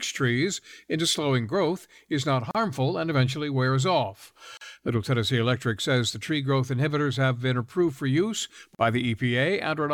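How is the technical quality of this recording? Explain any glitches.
The recording has three short dropouts in the speech. Each is a gap at a join of encoded pieces. They fall at 2.51 s, 4.57 s and 8.75 s, and last about 37, 39 and 43 ms. The audio was encoded in separate sections and spliced without trimming. Each section kept its encoder's leading silence and its padded final frame. At every join the speech stops abruptly, leaving a brief hole with smeared edges. It then resumes where it left off.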